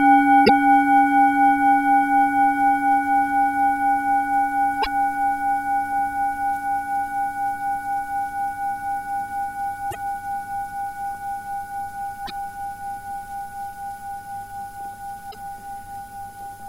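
You'll hear five short glitches from damaged data in a compressed stream, at 0.45–0.50, 4.79–4.87, 9.88–9.95, 12.23–12.31 and 15.28–15.35 s. Each lasts well under a tenth of a second. At those points the coded data was corrupted, so the decoder misread or threw out those frames, lost its place, and had to hunt for the next valid frame header. That's what makes the brief chirps and blips cutting into the sound.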